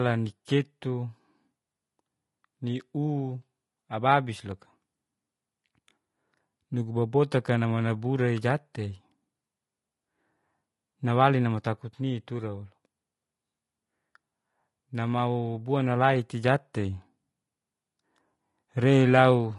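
Throughout, the speech was likely squeezed through low-delay AAC compression at around 32 kbps, leaving voices rough and grainy, with noise filling the gaps between harmonics.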